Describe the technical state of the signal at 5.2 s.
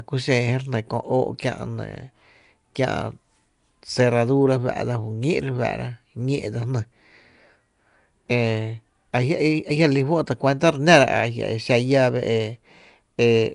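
At 5.2 s the speech has a rough, hissy halo and a smeared, underwater quality that runs through the whole clip, with nothing above about 10.7 kHz. That points to Nellymoser compression, likely Flash's Asao codec packing 256-sample blocks into two bits a sample, with the weak bands filled in as noise.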